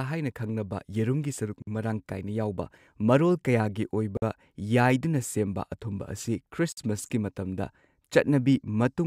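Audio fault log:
1.62–1.67 s, 4.17–4.22 s, 6.72–6.77 s: gap between chunks. Abrupt 50 ms silent holes in the speech recur about every 2.55 s, from silence inserted between 2.5 s chunks.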